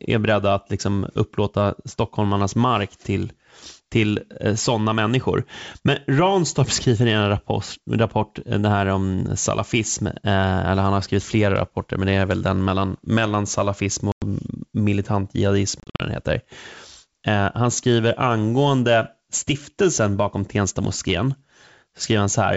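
Packet loss on an ADPCM call cuts a hard 100 ms silent hole at 14.12 s, between "den mellan mellan salafism" and "militant jihadism", then scattered gaps totalling 160 ms from 15.80 to 16.00 s. Unlike plain dropouts, each return sounds slightly distorted while the decoder resynchronises.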